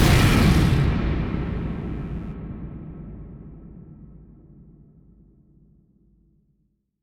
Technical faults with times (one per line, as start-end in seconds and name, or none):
0.69-2.36 mains buzz